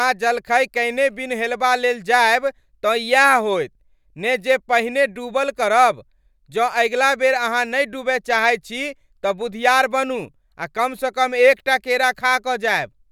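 No technical faults are audible.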